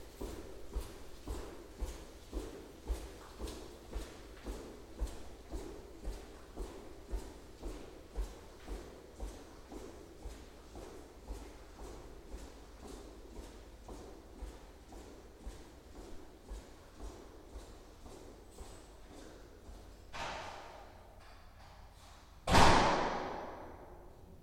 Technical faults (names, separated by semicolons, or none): none